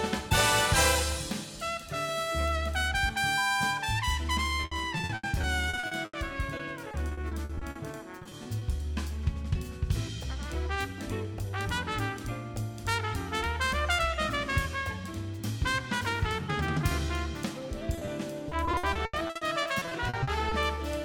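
From 4.61 to 6.15 s and 6.57 to 8.63 s, repeated packet loss (robotic sound) chops the audio. Lost stretches are patched by extending earlier sound, giving a choppy texture with pieces missing. At 17.95, 17.99 and 18.05 s, short concealed packet loss leaves brief smears where 20 ms holes were filled. From 18.49 to 20.79 s, repeated packet loss returns, with gaps up to 80 ms.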